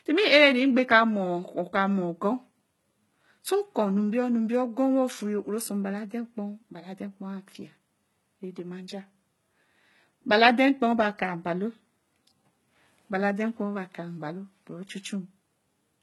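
Heavy HE-AAC compression, likely at a bitrate around 16 kbps, runs throughout the speech. Only the lower spectrum is truly coded, and the treble is copied upward from lower bands. The highs stay bright but false, so s sounds come out gritty, lispy and metallic.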